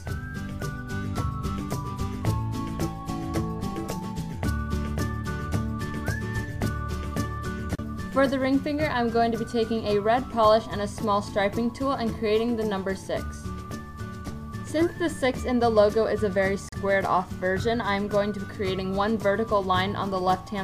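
At 16.69 to 16.73 s the sound drops to silence for 38 ms, then resumes. This is a Bluetooth stall: the headphones' buffer likely emptied while radio interference held back packets, so playback paused until the retransmitted data arrived.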